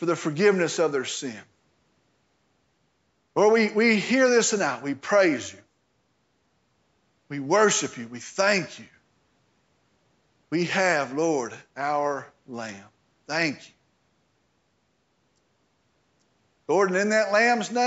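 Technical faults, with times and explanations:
No technical faults detected.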